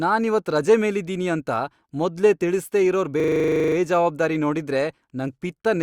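From 3.2 to 3.76 s, after "ಅಂತ ಮೊದ್ಲೇ ತಿಳಿಸ್ದೇ ಇರೋರ್", comes a system hang loop. The system froze, repeating one 40 ms slice. It buzzes at 25 Hz.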